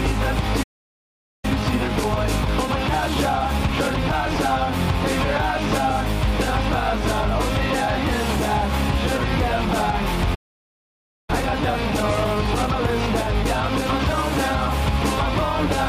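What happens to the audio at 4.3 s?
The audio sounds hurried but keeps its normal pitch. At 4.3 s it is near the end of a time-compressed catch-up running from 1.45 to 4.45 s at about 1.1 times normal speed. After a stall, the player clears its backlog by cutting out small slices and cross-fading the joins.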